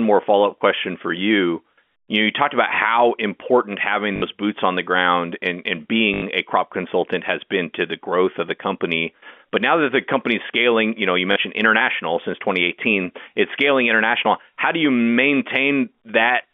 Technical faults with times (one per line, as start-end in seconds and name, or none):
4.16-4.22 packet loss with last packet repeated
6.14-6.22 packet loss with last packet repeated
11.32-11.36 packet loss with last packet repeated